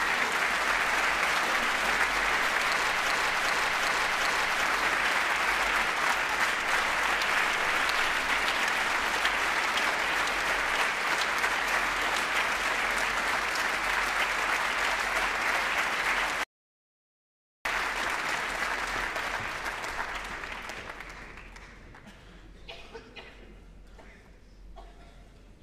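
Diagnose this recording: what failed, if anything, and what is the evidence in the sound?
Two things went wrong here. First, a broken-record loop from 3.1 to 4.63 s: a fragment of about 384 ms plays four times back to back. That's likely a stalled player or stream buffer resending its last chunk, so the intended audio there is gone.

Second, an audio dropout to silence from 16.44 to 17.65 s, about 1.22 s of silence with no room tone underneath. The sound cuts mid-flow and resumes just as abruptly, most likely because the input link or device dropped while recording continued.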